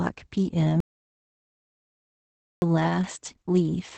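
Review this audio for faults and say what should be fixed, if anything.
Opus voice compression runs throughout. The speech sounds muffled, hoarse and slightly robotic, which fits SILK coding at a low bitrate of around 10 kbps, where the excitation is coded coarsely. A spectrogram shows a hard ceiling, with nothing above 8.7 kHz. To prevent this, encode at a higher bitrate, roughly 24 kbps or more for wideband speech.

An audio dropout to silence runs from 0.80 s to 2.62 s, and about 1.82 s of speech is lost. The waveform is flat at zero with no room tone, and the spectrogram shows a blank column across every frequency. The likely cause is a lost input feed, such as a disconnected device or a failed link. To prevent this, monitor input connections and levels while recording so that a lost feed is caught immediately.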